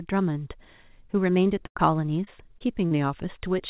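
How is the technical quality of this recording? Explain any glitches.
The speech is narrowband, with nothing above 4 kHz, which fits G.711 telephone coding, and it has five packet-loss glitches between 1.66 and 2.93 s.

A burst of packet loss runs from 1.66 to 1.77 s. About 100 ms never arrived, so the receiver extended and faded the last sound. It is heard as a dying buzz or hiss. On a spectrogram it shows as smeared, repeating harmonics. On the waveform it is a decaying envelope.

Short concealed packet losses occur at 1.77–1.80, 2.24–2.29, 2.59–2.62 and 2.86–2.93 s, the last about 40 ms. Each gap was patched from the preceding sound. They heard as brief smears or wobbles, and show as blurred slivers on the spectrogram.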